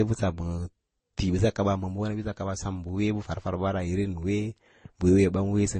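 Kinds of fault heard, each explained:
Transcoding between lossy codecs: The speech has several kinds of compression damage layered together. Nothing is heard above 9.6 kHz. The likely cause is repeated lossy encoding, with each pass adding its own artefacts. The mix fits low-bitrate MP3, Opus and Vorbis stages.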